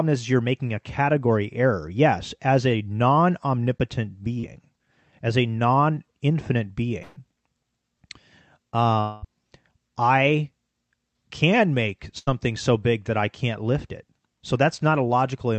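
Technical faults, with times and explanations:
4.39–4.45 s and 5.95–5.98 s, short concealed packet loss: after "as a non omnipotent" and "as a", roughly 40 and 20 ms went missing, patched by stretching the previous sound into a quick smear.
7.02–7.18 s and 12.18–12.29 s, burst of packet loss: about 140 ms and then 80 ms (the second between "can make" and "so big that I") get replaced by a held, fading continuation before speech jumps ahead.
9.00–9.25 s, long network dropout: the last sound drags on as a fading buzz or hiss for about 220 ms and then skips forward, likely a stretch where no packets arrived at all.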